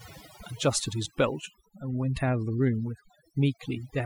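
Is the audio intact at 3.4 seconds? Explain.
No. Overdone noise removal is at work at 3.4 s, as it is throughout the clip. A noise reduction process set far too aggressively is pulling individual frequency bands down, or shutting them off entirely, whenever their level sits close to its noise estimate, and the softer components of the speech are being removed along with the noise. The result is a background that drops and breaks up into twinkling, warbling specks.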